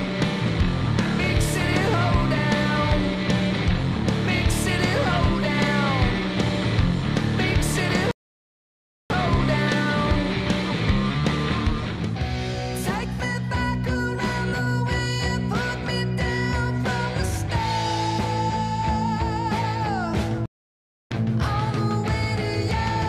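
Playback stalls at 8.11 s for about 0.99 s and at 20.46 s for about 0.65 s: the sound cuts to silence mid-flow, likely because the player ran short of data or its thread was blocked.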